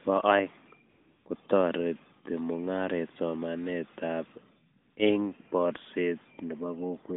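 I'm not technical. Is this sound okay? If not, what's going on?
No. At 0.9 to 1.26 s and 4.82 to 4.96 s you hear AMR comfort noise. The phone treated these moments as silence and stopped sending sound, so the receiving end filled them with a smooth, steady hiss. Unlike a dropout, the gap isn't silent but artificially even. The narrowband phone codec behind it, AMR-NB, sounds as expected.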